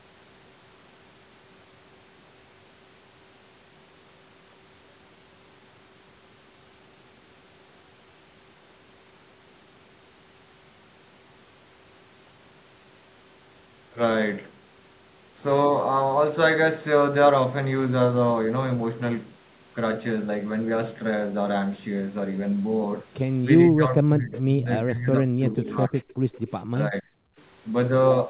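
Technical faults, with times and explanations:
23.64–24.69 s, 24.85–25.96 s, 26.71–27.05 s: speech suppressed in double talk. The echo canceller likely confused this talker with loudspeaker echo, pulling the speech down by about 20–25 dB.
24.32–24.41 s, 26.08–26.14 s, 26.32–26.52 s: echo leak. Residual loudspeaker pickup likely escaped cancellation, returning as a faint copy 0.47 s late, about 20–30 dB below the speech.
26.24–26.32 s, 27.33–27.37 s: background gated by the echo canceller. The canceller clamped the microphone during loudspeaker playback, so room sound briefly drops by about 19 dB and 25 dB.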